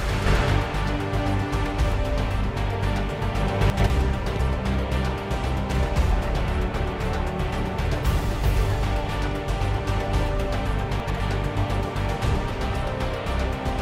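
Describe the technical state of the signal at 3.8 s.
A brief jumbled moment runs from 3.7 to 3.9 s: chunks out of order. One 100 ms block arrived a chunk late and plays after its successor, so nothing is missing but the sequence is swapped, leaving hard splices.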